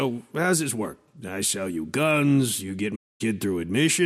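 At 2.95 to 3.22 s, AAC frame loss with muting zeroes a run of frames, and the sound fades out and back around a soft-edged 256 ms hole.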